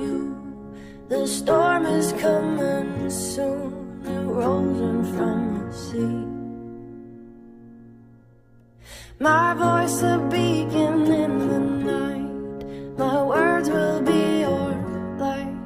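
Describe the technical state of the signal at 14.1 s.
The signal at 14.1 s is intact, with no audible fault at that moment.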